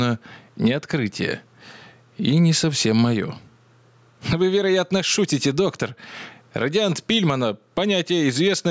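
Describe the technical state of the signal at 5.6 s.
At 5.6 s the signal shows gain pumping, which runs through the whole clip rather than starting there. The level is likely driven far too hot into a fast limiter, which pulls the gain down by around 15 dB on each loud sound. Loud and soft parts end up closer in level, and the sound is squashed. Unlike a noise gate, the floor never cuts to silence. The call-style band limit near 8 kHz is unrelated.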